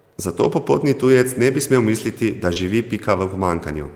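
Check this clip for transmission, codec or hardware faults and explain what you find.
Two kinds of packet-loss fault appear in this speech clip.

Lost packet rebuilt from error correction, at 0.39–0.45 s and 2.56–2.58 s. Low-bitrate backup copies replaced missing packets, so there is no gap, but the frames sound rougher and noisier.

Short concealed packet loss, at 2.53–2.58 s. About 20 ms never arrived. The decoder extended the preceding sound to fill it, giving a brief smear or wobble.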